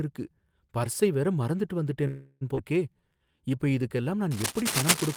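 At 2.07 s the sound stalls for about a third of a second, until 2.43 s. It's a call audio freeze: the last bit of speech smears on as a fading buzzy hiss, then picks up right where it stopped. Nothing's lost, just 337 ms of gap, likely from packets getting held up and the jitter buffer running dry.

Right after, at 2.55 to 2.59 s, there's a skip ahead. Roughly a fifth of a second of speech is just gone, with a tiny 21 ms join covering the seam. A chunk was dropped while later audio was already queued, so it jumps straight on.

From 2.94 to 4.11 s you get a jitter buffer slow-down. The receiver repeated single pitch periods to rebuild its reserve, padding in 171 ms, so the speech runs at about 86% speed. The pitch stays put, but sounds get drawn out.

Then from 4.31 s to the end there's cable scratch noise: dense, uneven bursts of scratchy rustle sitting about as loud as the speech itself. 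That's likely a worn cable, connector or control being moved, with its contact resistance jumping around.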